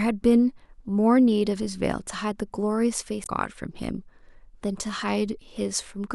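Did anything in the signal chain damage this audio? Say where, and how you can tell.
Yes. The compressed stream carrying this speech contains damaged data between 3.23 and 3.29 s, a stretch of about 65 ms. At the codec stage, the decoder hits frames whose bytes no longer make sense, misreads or discards them, loses sync and has to hunt for the next valid frame header before resuming. The result is a short glitch where normal decoding breaks off, followed by the signal picking up again once the decoder relocks.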